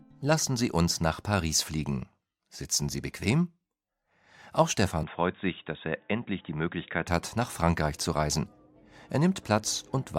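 At 5.03 s the sound suddenly turns dull and boxy, with nothing above about 3.8 kHz, and drops a few decibels in level. A faint new noise floor sits well under the signal, and the change happens with no gap at all. That fits the input switched to a poorer device, likely a fallback microphone or a headset's call profile with a narrower band. At 7.07 s the full, brighter sound snaps back just as abruptly.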